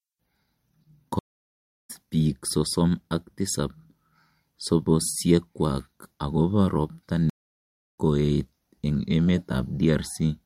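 A stream reconnect occurs at 1.19 s and 7.30 s. The connection drops, leaving 0.67 s and 0.62 s of silence, and a fresh decoder resumes the speech roughly 0.7 s further on, the first time at "biik sosom ak tisab".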